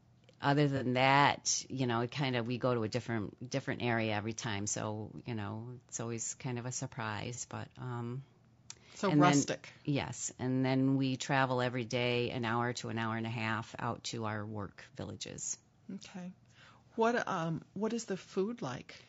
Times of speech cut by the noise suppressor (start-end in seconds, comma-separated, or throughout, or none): none